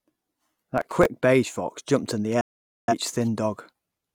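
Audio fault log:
0.78–1.06 s, processor overload crackle: a gritty, tearing crackle sits on the speech just before "beige fox jumped in". The processor missed about ten buffer deadlines in a row, each roughly 3 ms long, and each miss replayed a scrap of stale audio with hard edges.
2.41–2.94 s, digital broadcast dropout: right after "fox jumped in the", the sound fades out over about 3 ms and stays silent for about 0.47 s. The receiver muted while frames were lost, which fits about eleven missing frames, and that stretch is gone.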